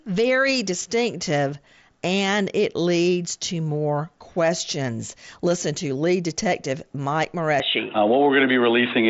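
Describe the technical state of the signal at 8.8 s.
Dull and boxy, with nothing above 3.8 kHz and a level shift of roughly 5 dB from 7.6 s to the end, likely an input switched to a poorer, narrower-band device.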